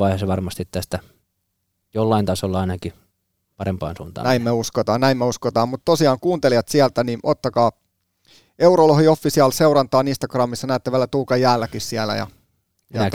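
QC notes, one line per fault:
4.64 s and 10.61 s, chunks out of order: a block of roughly 5.8 ms was written late, two blocks late at 4.64 s before "näin me uskotaan mutta" and one block late at 10.61 s before "näette vielä". The three hard joins from each reordering produce a brief jumbled moment.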